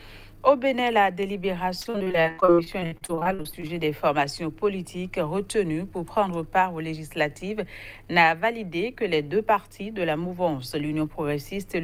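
From 1.81 to 3.71 s the audio suffers repeated packet loss, heard as a choppy, robotic stretch. Twenty-seven short dropouts, the longest about 60 ms, arrive in quick succession. Each is patched by extending the preceding sound, so about 37% of that span is concealment rather than real signal. On a spectrogram the region shows frequent smeared, repeated blocks and broken harmonics. The waveform shows a rapid run of copied segments with abrupt joins.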